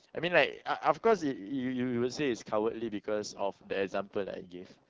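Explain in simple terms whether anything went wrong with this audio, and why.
Something did go wrong, and it runs through the whole clip: the speech has been squeezed by the AMR wideband (HD Voice) codec at one of its lowest settings. At that level the codec rebuilds the voice from a rough model, so the speech comes out raspy and gritty. What sets it apart from an old narrowband phone line is that the top end hasn't simply been cut off. There's still some airy hiss up high, but that hiss is filler noise, not real detail.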